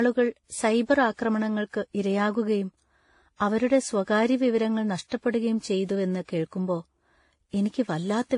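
From start to end, the speech has nothing above 10.5 kHz, and the different artefacts of three codecs, Vorbis at 29.4 kbit/s, MP3 at 48 kbit/s and WMA at 48 kbit/s, are heard together. The likely cause is transcoding between lossy codecs, with each low-bitrate pass adding its own damage and keeping the lowest cut-off.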